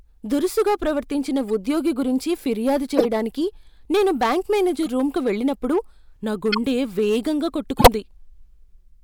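Hard clipping runs through the whole speech clip. The signal is driven about 8 dB past full scale. A few percent of samples are cut flat, giving crackle on peaks.

Corrupt frames are decoded at 1.49 s, 2.97 to 3.05 s, 4.83 to 4.88 s, 6.52 to 6.58 s and 7.77 to 7.88 s. Damaged frames played anyway give brief chirps and noise bursts. The faint blip comes after "దురుసుగా ప్రవర్తించిన", and the loud burst is near the end.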